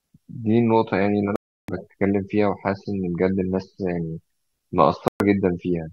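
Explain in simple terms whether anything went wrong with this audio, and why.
The speech cuts out twice, at 1.36 to 1.69 s and 5.08 to 5.20 s. It goes silent abruptly, then continues further along. This is likely a Bluetooth dropout. Sound data reached the headphones too late and was discarded.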